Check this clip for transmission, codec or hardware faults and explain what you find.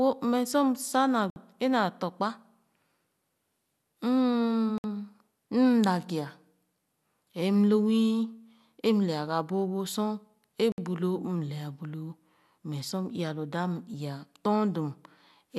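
Three short holes break the speech, each a block of digital silence: at 1.30, 4.78 and 10.72 s the sound drops for 60 ms. The output buffer was likely left unfilled, so those samples went out as zeros.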